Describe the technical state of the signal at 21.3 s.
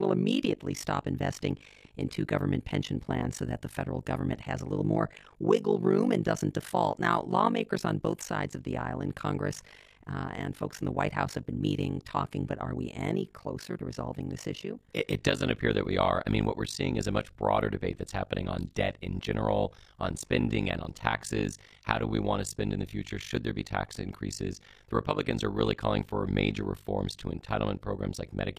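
Overlap-add ripple is present at 21.3 s, as it is across the whole clip. The speech was split into windowed frames and rejoined with overlaps that don't sum to steady gain, so level dips by about 60 dB around 50 times a second, giving a harsh, robotic flutter.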